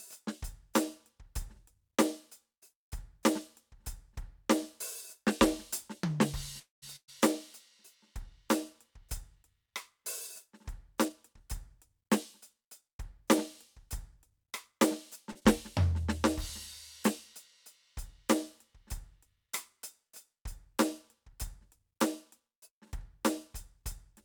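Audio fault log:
6.59 to 6.84 s, call audio freeze: packets were likely held up in transit and the jitter buffer drained, so the receiver stretched the last moment of the music into a fading buzz that sinks to near silence for about 160 ms, then resumed where it stopped, adding roughly 230 ms of delay without losing anything.
6.96 to 7.10 s, burst of packet loss: a run of consecutive packets never arrived in time, so about 120 ms of the music is simply gone; the receiver carried the last sound forward and faded it out, leaving a brief held sound and about 70 ms of silence before the music picks up further along.
11.05 to 14.79 s and 21.34 to 22.41 s, jitter buffer speed-up: the buffer had built up more audio than its target, so the receiver repeatedly cut out tiny pitch-period slices, running the music about 6% fast in the first stretch, removing around 200 ms, and about 3% fast in the second, dropping a few tens of ms; pitch stays put but the first stretch sounds hurried.
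15.31 to 15.37 s, short stall from a late packet: one packet arrived late and the buffer briefly ran dry, so the receiver held the current sound for about 37 ms with a faint buzzy dip, then carried on from the same point, with nothing missing but the moment drawn out.
15.39 to 15.43 s, short concealed packet loss: about 20 ms of audio failed to reach the decoder, and the receiver patched the hole by extending the preceding sound and blending back in, which comes across as a quick smear or wobble in the music.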